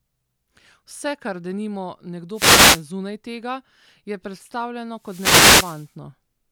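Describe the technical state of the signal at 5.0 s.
At 5.0 s the speech is caught in a wireless microphone noise hit, which runs from about 4.96 s to 5.95 s, roughly a second. The FM radio link from the mic fades as reflected paths cancel the direct signal, so the receiver's own noise climbs up through the audio. You hear it as a burst of static swishing in over the voice, then clearing just before 6 s.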